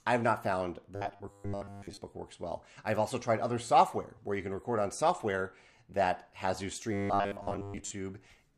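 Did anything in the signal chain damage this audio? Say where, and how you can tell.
Yes. Robotic sound from repeated short buffers, likely at the driver or buffer stage. At 0.95–1.97 s and 6.93–7.92 s, a 100 Hz buzz fits a looped 10 ms buffer.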